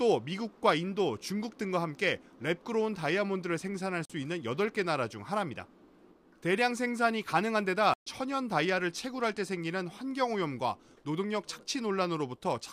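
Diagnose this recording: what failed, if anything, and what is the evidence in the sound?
The driver or buffer stage failed, leaving two blocks of digital silence. The sound drops abruptly to silence from 4.05 to 4.10 s (about 43 ms, which fits one 2048-sample buffer at 48 kHz) and again from 7.94 to 8.06 s (128 ms, about three such buffers). Output blocks went out unfilled. The sound cuts out and back with no fade. The waveform shows flat, silent stretches, and the spectrogram shows blank vertical bands.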